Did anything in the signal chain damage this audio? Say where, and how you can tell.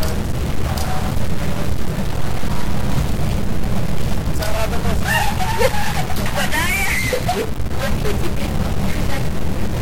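Yes. A stuck bit, likely at the converter, holds one bit fixed throughout. Harsh buzz covers the sound. Pauses fill with noise from a bit step of about -20 dBFS.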